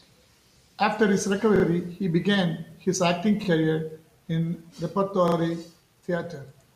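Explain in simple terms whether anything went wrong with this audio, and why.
Yes, the speech stutters three times because of a repeated buffer. At 1.56 to 1.64 s a 40 ms slice of sound plays three times over, at 3.44 to 3.48 s twice, and at 5.28 to 5.36 s three times again. The playback device ran short of fresh audio and replayed its last chunk, which fits a 40 ms buffer. Unlike a dropout, which leaves a silent gap, this fills the gap with a copy, giving a quick machine-like rattle with a hard seam at each repeat.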